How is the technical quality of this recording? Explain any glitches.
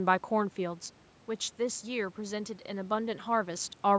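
The technical quality holds up, with no glitches to explain.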